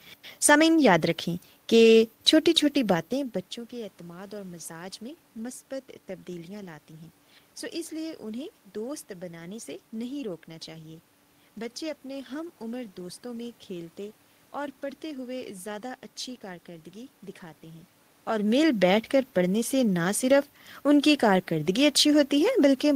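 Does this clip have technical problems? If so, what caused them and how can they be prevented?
No, no technical faults here.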